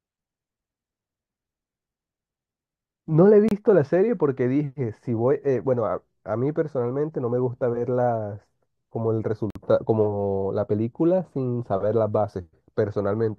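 At 3.49 s the speech drops out for about 28 ms, then again at 9.50 s for about 51 ms. Both are a gap between stream segments. The timestamps of neighbouring chunks don't quite meet, so the player pads the hole with silence. You hear a short, hard-edged dropout. Nothing is missing; the audio just resumes late. The two holes sit roughly 6 s apart, which fits a 6-second segment length.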